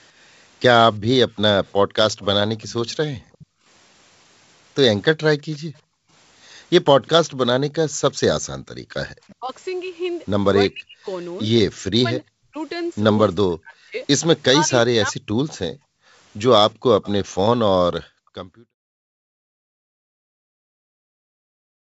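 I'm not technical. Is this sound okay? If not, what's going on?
No. From 2.12 to 7.26 s and again from 14.42 to 20.4 s there is a faint repeat of the voice about a third of a second (352 ms) behind it. This is an echo leak, likely from a speakerphone whose echo canceller let some of its own loudspeaker sound back into the call.

Between 3.15 and 8.93 s the room sound behind the voice dips and briefly disappears, about a second in all, and it does so again from 15.75 s to the end. This is background gated by the echo canceller: while the loudspeaker played, the call software turned the microphone down hard.

From 9.26 to 15.47 s the voice itself weakens or drops out in pieces, about two seconds in all. This is speech suppressed in double talk. Both people were likely talking at once, and the echo canceller turned everything down because it couldn't tell the talker from the echo.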